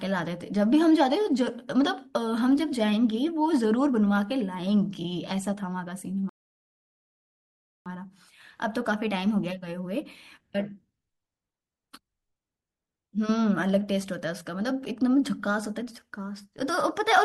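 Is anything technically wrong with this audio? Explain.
Yes. From 6.29 to 7.86 s the speech cuts abruptly to silence, then picks up exactly where it left off with nothing missing. That is a rebuffering stall: playback exhausted its downloaded audio and waited for more, adding about 1.56 s to the clip.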